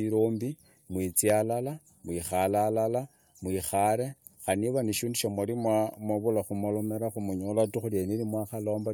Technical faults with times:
1.30-1.32 loud pop

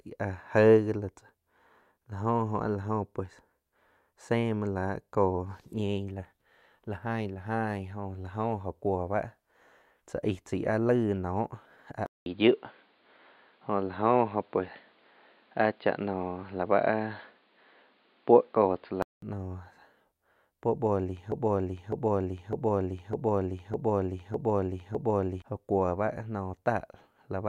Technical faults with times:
12.06-19.22 input switched to a poorer device
21.32-25.42 broken-record loop

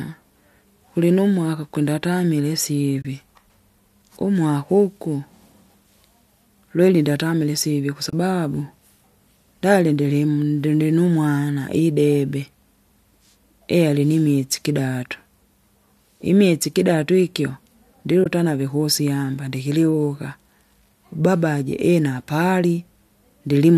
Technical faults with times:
3.02-3.05 AAC frame loss with muting
8.10-8.13 AAC frame loss with muting
18.24-18.26 AAC frame loss with muting

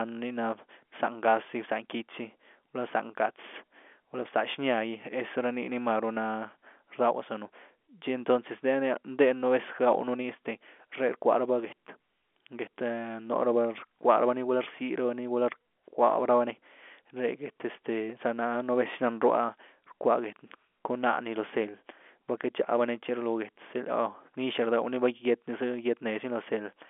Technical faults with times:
none

